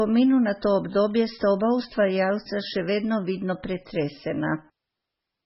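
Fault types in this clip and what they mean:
MP3 compression: Throughout, the sound is likely MP3 at a low rate, fitting about 16 kbps, and heavily damaged. Starved of bits, the encoder drops weak frequency lines frame by frame, giving a watery, swirling texture, and nothing survives above 5.6 kHz.
Loose connector crackle: At 1.11 s, between "na to" and "sta oba ustvarjalca še", a brief crackle bursts through. A worn or dirty contact momentarily breaks and remakes the signal path, chopping the audio and producing a short scratchy click.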